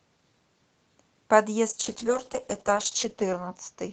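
From 1.71 s to the end of the clip, the speech goes through a call bitrate drop. The call's bandwidth estimate fell and the encoder was forced onto far fewer bits. The coarser coding makes the speech rough and watery, with the top end dulled, which fits a fall from about 48 kbps to about 8 kbps. The worst stretch lasts 1.26 s. Before the drop, the Opus call path carries audio up to 8 kHz.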